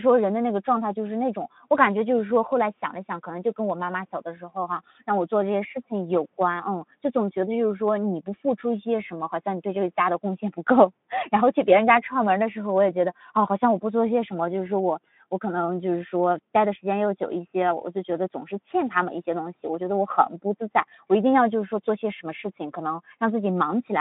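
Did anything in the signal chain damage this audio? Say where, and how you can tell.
No, nothing in the chain seems to have damaged this speech; it just comes through as narrowband audio carried by a Speex codec link.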